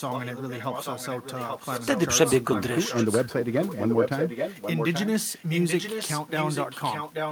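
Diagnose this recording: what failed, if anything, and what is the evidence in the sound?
An echo leak in call processing runs through the speech from 0.00 to 2.02 s, returns in scraps at 2.27 to 2.31, 2.53 to 2.62 and 2.89 to 3.34 s, then holds from 3.62 s to the end. A fainter copy of the speech trails it by 832 ms, roughly 10 to 15 dB lower. On a spectrogram each harmonic pattern reappears weaker 0.83 s later, and the waveform shows low-level bursts filling pauses. The likely cause is a far-end echo canceller passing loudspeaker pickup back.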